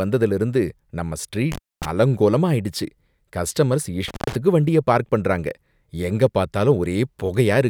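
At 1.52 s the speech drops out through an intermittent contact, most likely a loose cable or plug briefly losing connection. The line stays open for about 223 ms within the disturbance running to 1.86 s, with crackle as the contact breaks and remakes and faint hiss in the gap. The same fault returns at 4.08 s, shorter this time, open for about 110 ms inside a span ending at 4.35 s, again crackling at both edges.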